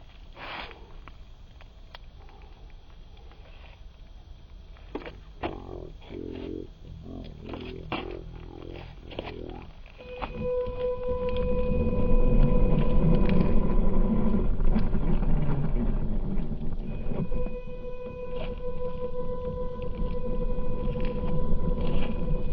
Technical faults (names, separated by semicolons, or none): stereo read as mono